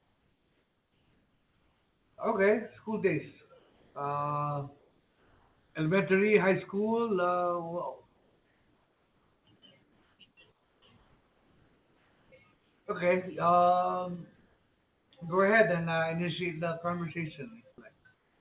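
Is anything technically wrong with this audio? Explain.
Yes. The background in the pauses of this speech is replaced by comfort noise: at 0.0–2.18 s, 3.59–3.95 s, 4.79–5.75 s (before "elementary high school"), 8.06–12.86 s, 14.36–15.11 s (before "go ahead and uh"), and 17.96 s to the end. The sender likely stopped transmitting during silence, so the receiver synthesised steady, featureless noise, about 2 to 4 dB quieter than the real background. Unlike a dropout or noise gate, the pauses never fall to true silence.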